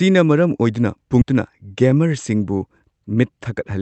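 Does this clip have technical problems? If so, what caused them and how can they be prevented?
Yes. A skip ahead at 1.21 to 1.23 s drops roughly 0.7 s of speech: a stretch of audio was dropped while later audio was waiting, and both sides were joined almost directly. Keeping buffer depth within limits and smoothing network delay prevents this.

A jitter buffer speed-up from 3.12 to 3.78 s runs the speech at 107% by cutting about 50 ms of pitch periods, which makes it sound hurried. Reducing packet bunching, or using a slower gradual drain target, avoids it.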